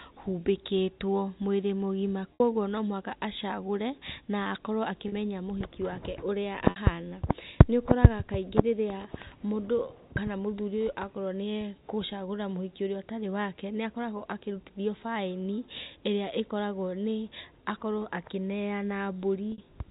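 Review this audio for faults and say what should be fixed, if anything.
Packet loss with pitch repetition occurs at 2.34 s, 5.08 s, 6.7 s and 19.52 s. Each gap lasts about 60 ms, except 40 ms at 5.08 s, which fits runs of two or three 20 ms packets. The receiver bridges each hole by repeating the last pitch period, so the sound briefly holds on a buzzy, static tone before normal audio resumes. The narrowband telephone coding is faint underneath. To prevent it, enlarge the jitter buffer and add forward error correction or redundancy on the network path.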